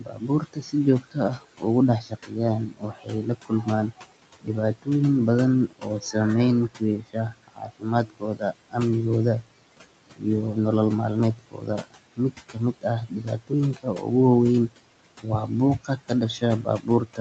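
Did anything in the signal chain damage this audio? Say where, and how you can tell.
Yes, the damage happens in the call processing stage. Noise suppressor artifacts run through the whole clip. The room noise drops by about 18 dB between phrases and rises back under the speech, so the background pumps frame by frame with the talker instead of staying steady.

The same noise suppressor also cuts speech at 0.0–4.88 s, 5.68–6.15 s, 6.69–8.76 s, 10.16–10.25 s, 11.35–14.07 s and 14.68–17.2 s. Within these spans, quiet parts of the speech fall by about 18–19 dB and sound swallowed. The suppressor treated those soft parts as background and turned them down with the noise.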